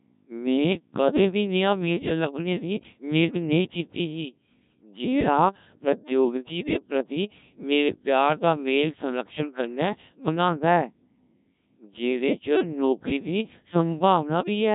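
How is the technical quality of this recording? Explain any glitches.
The quality is poor, with heavy vocoder damage across the whole clip. Throughout, a Codec 2 vocoder effect rebuilds the speech from pitch and spectral envelope using sine waves, which fits a bitrate of about 1.3 kbit/s. The result is robotic and buzzy, with no content above 3.8 kHz. A spectrogram shows a hard ceiling, and the waveform doesn't resemble natural speech.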